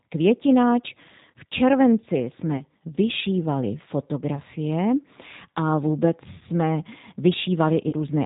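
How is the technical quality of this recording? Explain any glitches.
The recording is clearly degraded: plainly audible codec coloration throughout, plus four short concealment glitches.

The G.729 codec, here the G.729A variant at 8 kbit/s, rebuilds the speech from a vocal tract filter, pitch prediction and sparse pulses, giving a rough, slightly synthetic timbre. On a spectrogram, nothing appears above 4 kHz, and the harmonics look smeared.

VoIP packet loss concealed by the speech codec occurs at 2.57–2.64 s, 4.35–4.40 s, 6.39–6.43 s (just after "a vůbec") and 7.89–7.95 s. In each case the decoder extrapolated its last pitch and filter with falling gain, producing a brief buzzy tone or coloured noise that fades. The first three gaps fit a single 20 ms packet each, and the last fits about 40 ms. The waveform shows repetitive, decaying cycles there.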